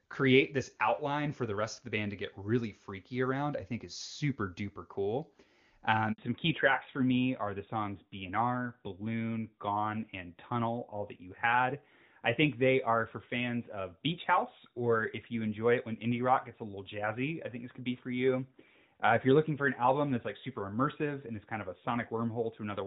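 A speech recording that drops out for about 60 ms at 6.12 s, the audio falling silent abruptly and returning at 6.18 s. This is a handover gap: while the call switched between networks, no speech frames arrived, so whatever fell in that window is simply lost. From 6.18 s to the end the sound turns duller and rougher, with nothing above 4 kHz. That is a fallback to narrowband, where the call left the clean HD Voice path, consistent with AMR-WB near 23.85 kbit/s, for an older narrowband codec, which fits AMR-NB at 12.2 kbit/s.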